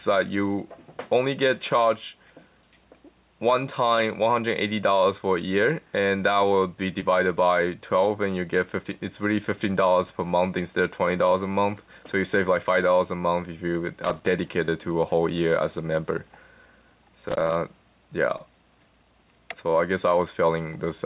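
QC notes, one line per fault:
7.00–7.04 s, 14.66–14.70 s, 18.38–18.41 s: short concealed packet loss. About 20 ms of audio arrived too late each time, and the receiver extended the preceding sound to cover the gap before blending back into the real signal, so each spot is a brief smear or wobble. On a waveform, the cycles before the gap appear to repeat or flatten. On a spectrogram, the narrowband image (nothing above 4 kHz, which fits a G.711 A-law call path) shows a short smeared patch.
14.04–14.27 s, 17.28–17.55 s: loose connector crackle. A contact in the chain made and broke repeatedly while it moved, chopping the signal at irregular moments, so each stretch of about a quarter of a second is heard as a burst of crackle or scratching. The waveform shows scattered spikes and abrupt breaks. The spectrogram shows irregular thin vertical streaks across the whole band up to the 4 kHz ceiling.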